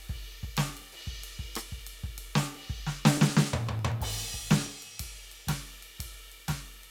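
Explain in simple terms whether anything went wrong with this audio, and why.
Something did go wrong: the music has periodic USB or driver dropouts. From 0.07 s to 6.77 s, a small tick sounds every 0.124 s, about eight per second and roughly fifty in all. Each tick marks a moment when something on the computer briefly held up the USB connection or audio driver, and about a millisecond of music was skipped outright. The music then jumps forward abruptly, and that tiny jump is the tick.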